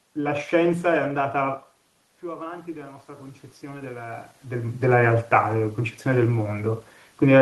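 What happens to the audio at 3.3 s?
Automatic gain rising: from 2.21 to 4.83 s the gain control lifts its gain by about 6 dB after the input falls about 16 dB, so speech and room noise swell together.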